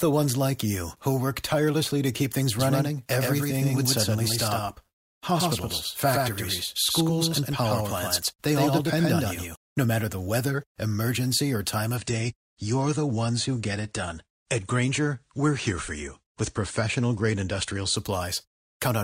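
Speech clip with two faults. From 2.6 to 9.6 s, after "tirelessly to keep things", a doubled audio track appears: an equally loud copy trails by about a tenth of a second, likely from an edit holding two copies out of step. Unlike an echo, it has no decay or room colour and starts and stops abruptly. From 11.96 to 17.96 s, after "weather emergency or time", an adaptive stream at a lower bitrate sets in. Nothing sounds above 9.7 kHz and codec artefacts rise, which fits a switch from 96 to 32 kbit/s AAC. Unlike a dropout, the quality changes suddenly with no gap.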